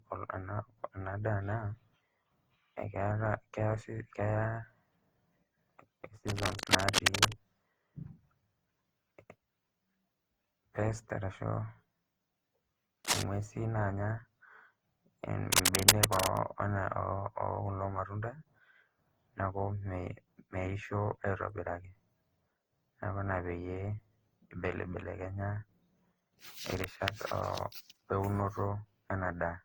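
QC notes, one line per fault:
throughout: generation loss. The speech sounds swirly, smeared and hollow, with soft blurred attacks and nothing above 20.4 kHz. The likely cause is repeated lossy re-encoding, around seven passes through Opus at 48 kbit/s, each requantising on a shifted frame grid so noise and spectral holes pile up.
6.27–7.34 s, 13.04–13.23 s, 15.52–16.38 s: cable scratch noise. Dense, uneven bursts of scratching and rustling sit over the speech, about 5 dB louder than it. The likely cause is a worn cable, connector or control being moved, its contact resistance jumping rapidly.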